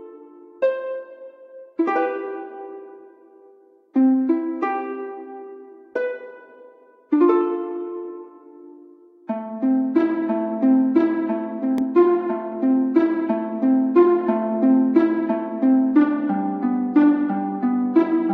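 At 11.78 s the audio has a block of digital silence. For about 0.73 ms the signal drops straight to silence and returns with no fade. The gap is too short to hear as a hole. It is heard as a tick or dip.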